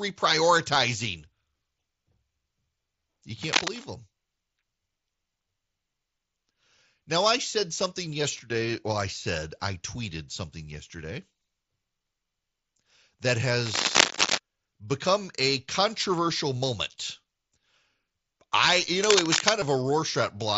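At 3.41 to 3.85 s, 13.66 to 14.38 s and 19.03 to 19.50 s, bursts of cable scratch noise rasp over the speech. The first and last are roughly as loud as the speech, and the middle one is somewhat louder. These are most likely from a worn lead or connector being moved, which makes its contact resistance flicker. Unlike isolated clicks or the light grain the mSBC headset codec adds to loud sounds, each burst is dense and irregular and lasts roughly half a second to three quarters of a second.

At 19.6 s, just after the last scratch, there is a brief concealed Bluetooth headset packet loss lasting about 15 ms, which fits a couple of lost packets. The receiver filled the gap by repeating a short stretch of the preceding waveform. A plain dropout would leave a silent hole.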